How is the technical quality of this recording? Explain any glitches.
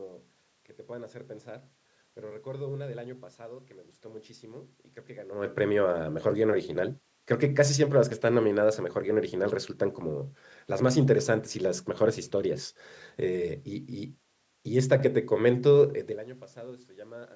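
Nothing stood out as a technical problem on listening to this speech recording, and the level changes around 5.5 and 16 seconds sound like the talker shifting position relative to the microphone.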